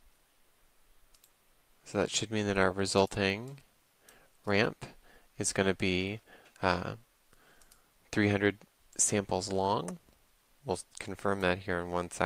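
Nothing in this audio stands out as a technical problem, so there's no fault to point to here.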